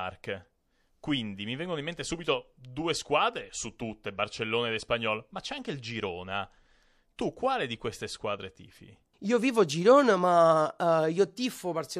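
Speech, with one pre-echo fault from 7.17 to 7.19 s. A short hiss, about 11 dB above the quiet floor, smears the 22 ms before a sharp attack. The transform codec spread its quantisation noise across a long block, which fits a roughly 36 ms window with no switch to short blocks.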